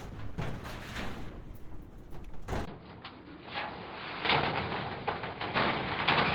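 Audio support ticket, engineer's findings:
Opus compression across the whole clip: grainy, hoarse texture on these everyday sounds, typical of the encoder's hybrid speech-style mode rather than its music mode. Likely a low-rate Opus stream; the damage fits roughly 16 kbps.

Input switched to a poorer device at 2.65 s: brief 20 ms dropout, then everything above 5 kHz disappears and sounds go dull. Level unchanged, with a faint new noise floor well under the signal. Likely an OS input swap mid-capture.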